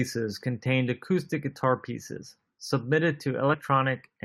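Around 3.53 to 3.55 s, compressed frames get skipped: the speech jumps ahead roughly 40 ms, about two 21.3 ms frames.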